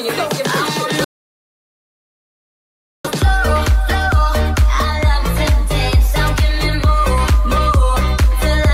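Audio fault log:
1.04–3.05 s, playback stall: the sound breaks off abruptly in mid-flow and the output goes completely silent for about two seconds before audio returns at 3.05 s. The gap is dead silence rather than a fade or dropout noise, which points to the player itself stopping output. The likely cause is that the player ran short of incoming data or its audio thread was blocked, so nothing reached the output until it recovered and resumed feeding samples.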